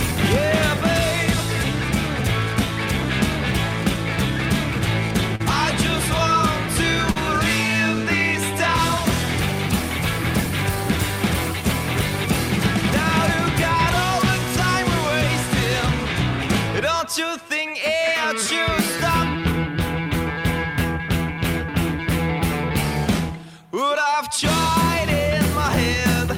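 At 5.35 to 5.41 s and again at 7.11 to 7.17 s there is short concealed packet loss. About 40 ms of audio failed to arrive in time, and the receiver filled each gap by extending the preceding sound before crossfading back. Both spots sound like a brief smear or wobble rather than a hole. A plain dropout would leave a gap of silence or a hard click, but here the texture carries on.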